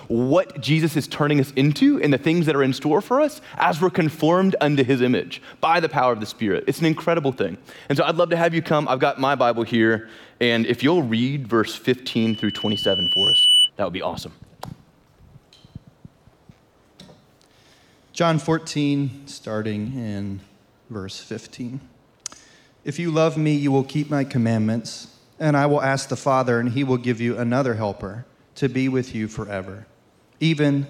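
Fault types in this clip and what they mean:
Loudspeaker feedback squeal: the microphone re-amplifies its own loudspeaker, and a 3 kHz tone swells over roughly one and a half seconds from 12.06 to 13.7 s, peaking about 5 dB above the sound. A spectrogram shows a brightening horizontal line; the waveform envelope balloons.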